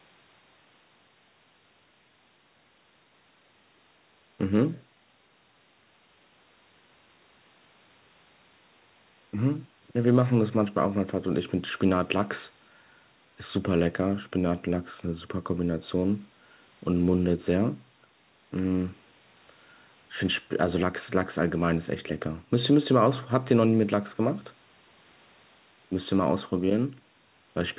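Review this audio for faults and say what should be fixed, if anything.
No faults are audible here, so nothing needs fixing.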